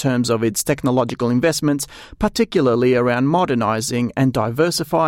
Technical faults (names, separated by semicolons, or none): loud pop